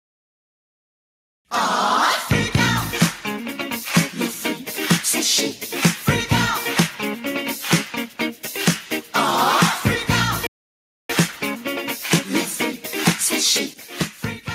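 At 10.47 s the sound cuts out abruptly and stays silent for about 0.63 s before resuming at 11.10 s. This is a playback stall, most likely caused by the player running out of buffered data or its output thread being briefly blocked.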